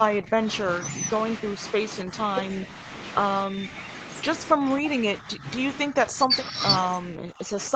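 The speech level dips six times: 0.07 to 0.48 s (about 15 dB at its deepest), 2.03 to 2.13 s (about 10 dB), 3.47 to 3.76 s (about 5 dB), 4.54 to 5.45 s (about 10 dB), 5.89 to 6.55 s (about 15 dB), and 7.01 s to the end (about 30 dB). The voice sags and pieces of syllables drop away. This is likely speech suppressed in double talk, where the echo canceller confuses the near talker with loudspeaker echo and attenuates both.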